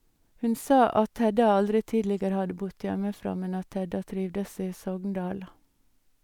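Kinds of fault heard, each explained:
No kinds of fault are heard in this speech recording.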